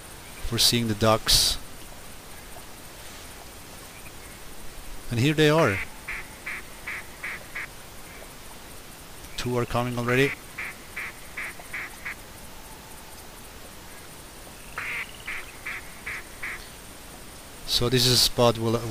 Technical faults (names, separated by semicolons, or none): corrupt frame decoded